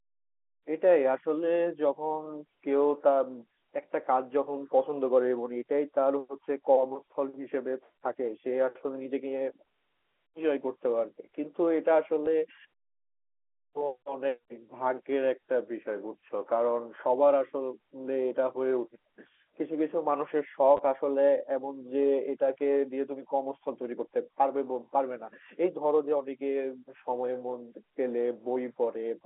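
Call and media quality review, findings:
Packet loss with last packet repeated, 12.26 s: receiver jitter buffer or concealment replayed the previous packet over a 10 ms gap, fitting a single 10 ms packet. Single repeat; small blip.

Same fault, 20.77–20.79 s: 20 ms gap, consistent with two consecutive 10 ms packets. Back-to-back repeats give a brief 100 Hz buzz, a short robotic stutter, band-limited to the 300–3400 Hz G.711 A-law telephone band.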